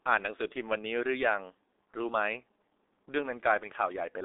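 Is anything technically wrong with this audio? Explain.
Yes. G.723.1 codec damage runs through the entire clip. The codec packs speech into 30 ms frames at a very low rate, consistent with about 6.3 kbit/s, and nothing above 3.7 kHz survives. The speech sounds muffled and hoarse, with smeared, indistinct consonants.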